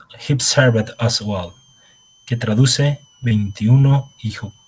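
Switching supply whistle, from 0.56 s to the end: a power supply's oscillation leaks in as a faint whistle around 3 kHz, drifting between 2.94 and 3.25 kHz, well below the speech.

Repeated packet loss (robotic sound), from 3.24 to 4.57 s: audio packets kept going missing, each hole of up to 20 ms patched by stretching the previous sound, leaving choppy speech in that stretch.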